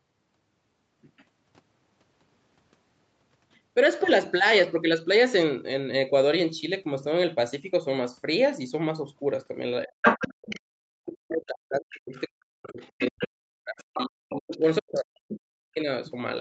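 Speech suppressed in double talk at 9.85 to 10.04 s, likely because the echo canceller could not tell the talker apart from the loudspeaker echo while both sides spoke. The speech drops by as much as about 40 dB for roughly a fifth of a second.

The other side's voice leaks through from 10.03 to 10.6 s at about the same level as the talker, likely residual echo the canceller failed to remove, heard as a second voice.

Speech suppressed in double talk returns from 10.89 to 15.88 s, dipping by up to about 40 dB across roughly four seconds in total, so the talker fades.

Within that stretch, leaked far-end voice appears at 11.94 to 12.21 s (about 20 dB below the speech), 12.65 to 13.28 s (about 15 dB below) and 13.81 to 14.58 s (about 10 dB below), growing more noticeable each time.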